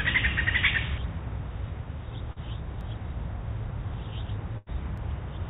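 At 0.78 s there is a small jump in the sound, with no gap or fill. That points to a dropped buffer (overrun), likely from the program collecting samples too late so the hardware overwrote them, losing only a few milliseconds. The same skip recurs at 2.81 s and 4.98 s. They differ from packet loss because nothing is synthesised: the two sides simply butt together, so you hear a discontinuity rather than a smear.

From 2.32 to 2.39 s comes a short concealed packet loss. About 30 ms of audio never arrived, and the receiver covered it with 37 ms of continued sound before blending back into the real signal. It comes across as a brief wobble or smear, not a hard click. Unlike the overruns, the hole is papered over with a plausible continuation, and the transition is soft.

Between 4.58 and 4.69 s there is a burst of packet loss: about 90 ms missing, covered by 88 ms of concealment that fades as it goes on. 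The sound turns into a held, decaying buzz or hiss, then resumes further on with that stretch gone. Its length and audible fade set it apart from the quick smear at 2.32 s. Through all of this, the G.711 call path limits the audio to nothing above 4 kHz.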